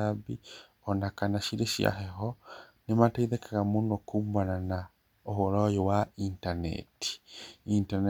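No technical faults can be heard at any point in the speech, so there is nothing to place in time order.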